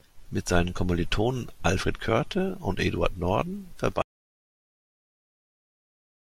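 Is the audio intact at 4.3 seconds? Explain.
No. At 4.3 seconds the clip is inside an audio dropout to silence that begins at 4.02 s and runs to the end. The speech cuts off abruptly into dead silence, with no room tone, most likely because the input was lost while recording continued. The waveform is flat and the spectrogram is blank.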